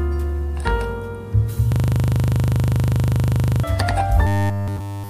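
From 1.72 to 3.64 s there is a system hang loop. The machine froze while the hardware kept replaying its ring buffer. One 40 ms slice repeats exactly 48 times, giving a hard, rattling stutter at 25 Hz in place of the real sound.

From 4.27 s to the end, the sound turns robotic, as if built from repeated short buffers. It becomes a rigid, metallic buzz fixed at 100 Hz. The likely cause is new audio arriving too seldom, so essentially every moment reuses a 10 ms piece.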